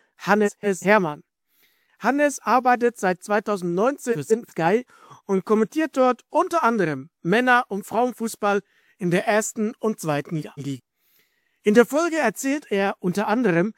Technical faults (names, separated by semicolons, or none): frames out of order